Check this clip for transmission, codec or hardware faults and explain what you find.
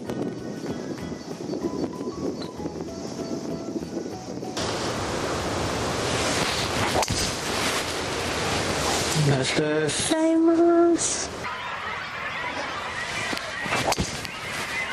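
Nothing in the signal points to a transmission, codec or hardware problem; its continuity and bandwidth hold steady across the whole clip.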